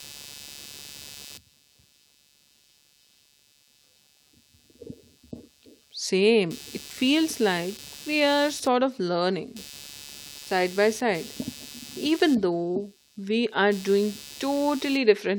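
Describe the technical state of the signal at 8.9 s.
Computer activity noise is present at 8.9 s, as it is across the whole clip. Shifting current draw from the processor, graphics card or mouse disturbs the ground the audio circuit shares with the computer, and that disturbance leaks into the signal. At 8.9 s it sounds like a buzzy, chirping pulse train repeating at around 150 Hz, sitting roughly 20 dB below the speech. It follows the computer's load rather than anything in the speech itself.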